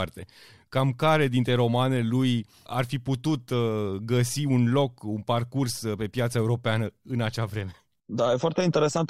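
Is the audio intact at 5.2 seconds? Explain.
Yes, the speech at 5.2 seconds plays through cleanly with no dropout, click, distortion or other fault at that point.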